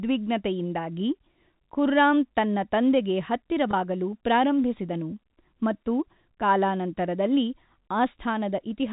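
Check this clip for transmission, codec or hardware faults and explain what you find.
One transmission fault stands out: a brief packet loss with pitch repetition from 3.71 to 3.73 s, right after "ಖುರ್ರಾಮ್ ತನ್ನ ತಂದೆಗೆ" and before "ಪ್ರಾರಂಭಿಸಿದನು ಮತ್ತು ಕಾಲಾನಂತರದಲ್ಲಿ". About 20 ms of audio went missing, which fits two 10 ms packets. The receiver filled the gap by looping the last pitch period, so the sound briefly holds on a slightly buzzy, frozen tone before normal speech resumes. On a waveform this appears as a short run of identical repeating cycles. On a spectrogram it shows as flat, evenly spaced harmonics with no formant movement. The whole clip passes through G.711 A-law telephone coding, which is why nothing above 4 kHz is present.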